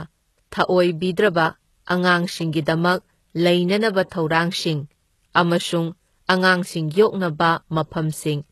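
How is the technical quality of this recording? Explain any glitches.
The recording is speech with plainly audible codec damage throughout, likely from HE-AAC compression at a low bitrate, around 16 kbps. Only the lower spectrum is truly coded. The treble is rebuilt by copying lower bands upward, so harmonics misalign and s sounds turn gritty, metallic or lispy. On a spectrogram, upper bands look like pasted, blocky repeats of lower ones, with nothing above 12.3 kHz.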